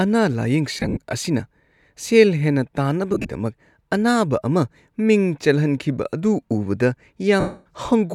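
Speech, with three stretches where the sound turns into a grainy, noisy smear and thins out: 0.75–0.97 s (just before "ꯑꯁꯤꯅ ꯁꯦꯜ ꯍꯦꯟꯅ"), 3.14–3.29 s (just after it) and 7.40–7.66 s. These are lost LE Audio frames. The LC3 decoder fills each gap by replaying the last spectrum with randomised signs.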